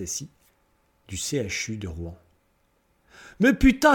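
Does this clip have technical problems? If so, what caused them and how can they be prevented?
No, nothing stood out as a technical problem on listening, so there is nothing here that needs preventing.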